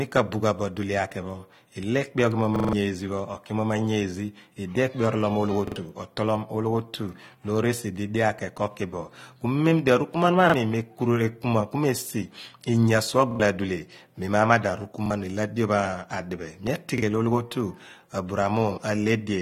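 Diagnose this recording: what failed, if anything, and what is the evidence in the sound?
Codec stage: the speech is dull and smeared throughout, with fizzy sibilants and nothing above 16.6 kHz, likely from AAC compression at a low bitrate near 32 kbps. A spectrogram would show a hard ceiling there and patchy holes in the upper bands.

Driver or buffer stage: repeated buffer stutters at 2.56–2.73, 5.68–5.76, 10.50–10.54, 13.31–13.40, 15.06–15.10 and 16.98–17.02 s. Each repeats one segment of about 43 ms, which fits a 2048-sample buffer, up to several times. Fresh audio was late, so the last block replayed. A waveform would show identical repeating blocks with hard joins.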